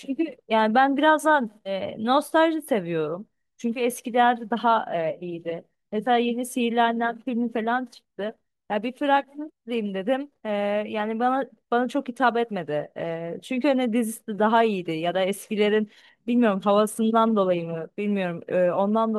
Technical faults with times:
none

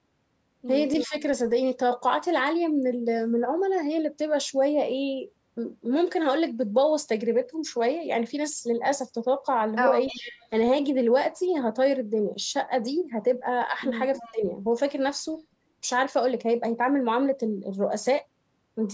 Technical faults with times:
0.93-1.07 echo leak
1.07-1.14 speech suppressed in double talk
10.05-10.48 echo leak
13.70-13.77 speech suppressed in double talk
14.15-14.32 echo leak
14.22-14.42 speech suppressed in double talk

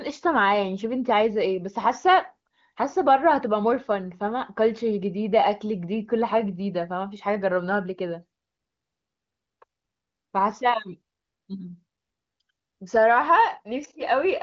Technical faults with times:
none

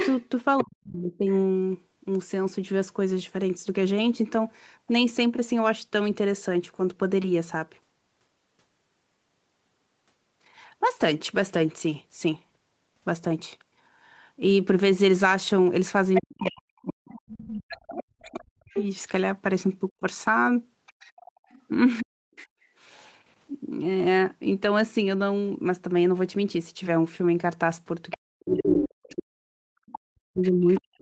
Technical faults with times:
0.00-0.63 other side's voice leaking through
0.62-1.27 speech suppressed in double talk
16.14-22.44 other side's voice leaking through
16.21-22.38 speech suppressed in double talk
28.11-30.80 other side's voice leaking through
28.13-31.01 speech suppressed in double talk
29.99-30.04 background gated by the echo canceller

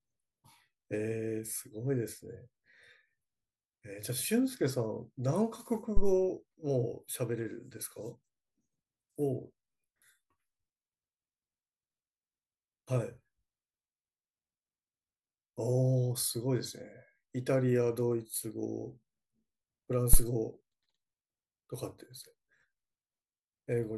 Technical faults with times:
5.97-6.17 phantom power thump
20.13-20.24 phantom power thump

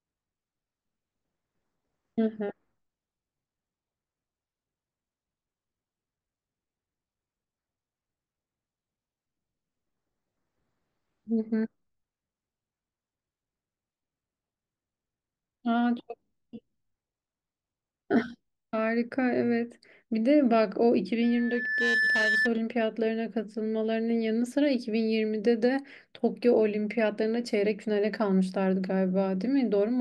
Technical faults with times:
21.23-22.51 loudspeaker feedback squeal

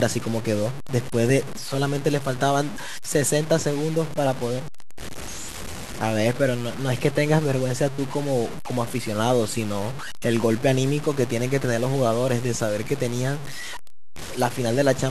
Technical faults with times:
0.00-15.11 low bit depth without dither

